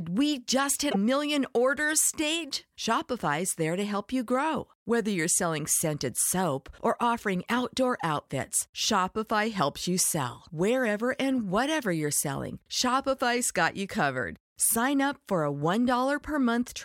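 A speech clip where MP3 frames were likely dropped from the stream, so the following frames reached back into the bit reservoir and decoded bytes from the wrong frame: from 0.90 to 0.96 s, between "we just" and "million orders stage", the sound skips ahead with a brief chirp, noise burst or gap about two 26.1 ms frames long.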